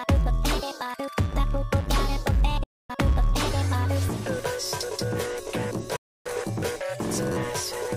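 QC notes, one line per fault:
2.63 to 2.90 s, digital broadcast dropout: the sound fades out in about 8 ms and stays silent for roughly a quarter second, consistent with the receiver muting after losing about eight 32 ms frames. The waveform shows a flat gap and the spectrogram a blank vertical band.
5.96 to 6.26 s, digital broadcast dropout: a second, slightly longer mute of about 0.29 s, again with an 8 ms fade. It fits roughly nine lost frames. The audio sent during the gap is gone, leaving a clean-edged hole across all frequencies.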